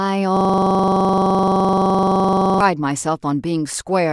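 Speech with a system hang loop, 0.37–2.61 s: a frozen 1024-sample buffer repeats every 43 ms (23.4 Hz), drawing identical waveform blocks and evenly spaced spectrogram stripes.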